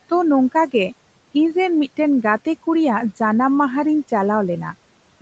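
No faults are present in this speech: the call's microphone processing leaves nothing above 8 kHz and trims the lowest bass as expected, and the room's background noise sits about 22 dB below the speech.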